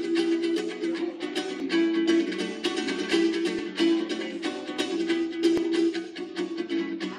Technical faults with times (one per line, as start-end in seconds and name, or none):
1.60 audio missing between chunks
3.59 audio missing between chunks
5.57 audio missing between chunks